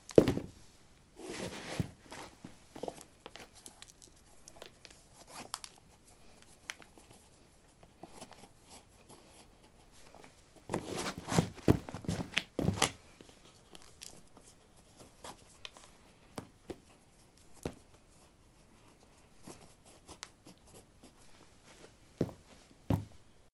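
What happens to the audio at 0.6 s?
At 0.6 s, as throughout the clip, the resampler restarted on every block. The sample-rate converter taking the audio from 24 kHz up to 48 kHz handled each 20 ms block in isolation and never carried its filter history across the boundary, so every block edge was computed against missing or wrong neighbouring samples. The resulting small error at each seam repeats 50 times a second, heard as a 50 Hz buzz riding on the sound wherever signal is present.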